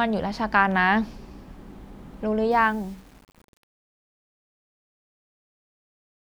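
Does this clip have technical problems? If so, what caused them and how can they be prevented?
Yes. The speech fade-out carries truncation distortion from 2.51 s to 6.27 s and is at its worst from 2.57 s to the end at 6.28 s. The fade starts around 2.5 s, and as the level drops, the waveform is rounded to coarse steps without dither. The grit at the quiet end fits a stage holding only about 8 bits. To prevent it, apply fades at high internal resolution and dither only once, at the final word-length reduction.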